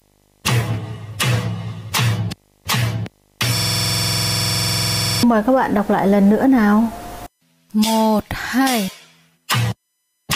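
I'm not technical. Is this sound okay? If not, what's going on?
No. From the start to about 6.0 s there is video or display buzz: a screen or video cable leaks into the audio as a 50 Hz hum, plus a faint whistle near 15.6 kHz. From 3.57 to 5.23 s a system hang loop occurs: the computer froze and the same 46 ms scrap of sound repeated about 21 times per second, giving a stuttering buzz.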